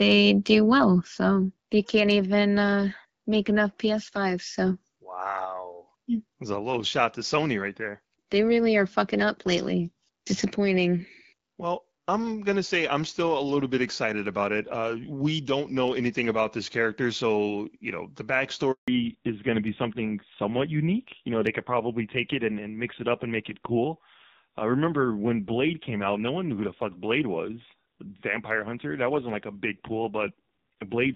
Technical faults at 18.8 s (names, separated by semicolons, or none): handover gap; fallback to narrowband